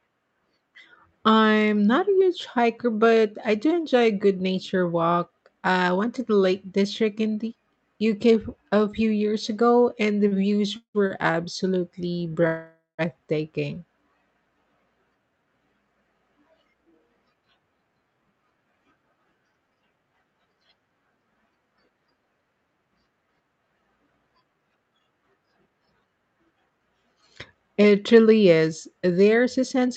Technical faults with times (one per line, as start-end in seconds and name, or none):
10.27-11.13 repeated stalls (stutter)
12.47-13.01 call audio freeze
16.50-20.04 jitter buffer speed-up
24.27-25.20 jitter buffer speed-up